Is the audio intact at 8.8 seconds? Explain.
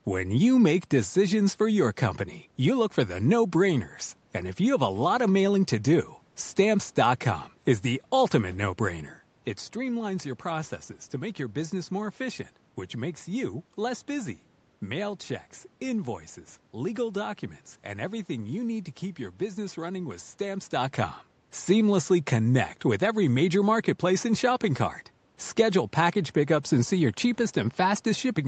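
Yes, the audio is intact at 8.8 seconds, with no dropout, click, distortion or other fault at that moment.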